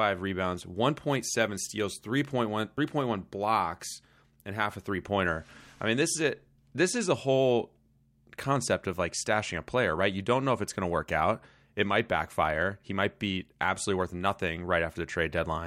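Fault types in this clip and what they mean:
Nothing stood out on listening to this speech recording.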